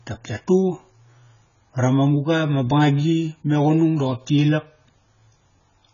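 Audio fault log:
Throughout, AAC compression: the speech is dull and smeared, with nothing above 7 kHz, and sibilants and sustained vowels take on a warbling, fizzy texture. The damage is heavy and fits AAC-LC at a bitrate of about 16 kbps, which is the likely cause. At that rate the encoder drops the upper band and quantises each frame's spectral lines so coarsely that gaps open between components and get patched with noise, and the shifting gaps produce the warble.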